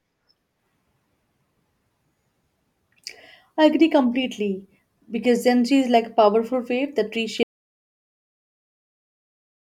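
At 7.43 s, right after "a powerful wave that", the speech cuts off mid-flow into silence, with no room tone, lasting to the end. This is an audio dropout to silence, most likely a lost input that the recorder kept filling with silence.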